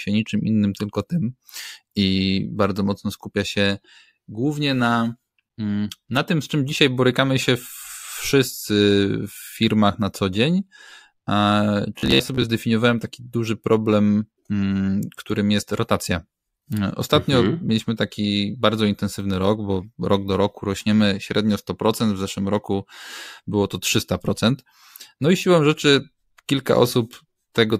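From 11.99 to 12.47 s, just before "zdefiniowałem taki duży problem", audio likely arrived too seldom, so playback looped a short buffer of about 15 ms in place of roughly two fifths of the sound. This robotic sound from repeated short buffers is a rigid metallic buzz at 66.8 Hz.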